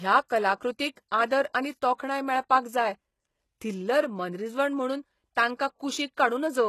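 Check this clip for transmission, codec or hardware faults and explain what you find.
One codec fault runs through the whole speech clip. Throughout, the treble stops dead above about 12.3 kHz, and s sounds turn gritty and metallic, likely from HE-AAC compression at a low bitrate fitting around 16 kbps. Band replication copies lower harmonics upward, so the treble stays bright but misaligned rather than simply dull, as plain low-pass filtering would leave it.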